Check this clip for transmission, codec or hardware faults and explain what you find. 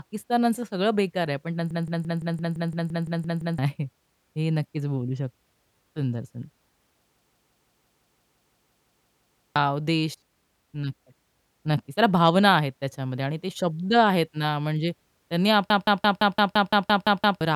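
The clip has three system hang loops, at 1.71–3.58 s, 7.17–9.56 s and 15.70–17.41 s. In each, the playback system froze while the audio hardware kept replaying one stuck buffer. A 171 ms slice of speech repeats exactly, 11, 14 and 10 times respectively, at 5.86 Hz. The loop length fits an 8192-sample buffer. This produces a machine-gun stutter that replaces about two seconds of speech in the first two events and about one and a half in the last.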